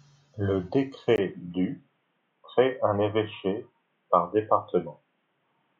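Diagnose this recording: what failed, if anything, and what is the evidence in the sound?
At 1.16 s the speech goes dull and boxy and stays that way to the end, with a 20 ms gap right at the changeover. Past that point there's nothing above 3.8 kHz. The level hardly moves, and a new faint noise floor sits roughly 50 dB under the voice. That looks like an input switched to a poorer device at the driver level, most likely a mid-recording hop to a narrower-band mic or a headset's call profile.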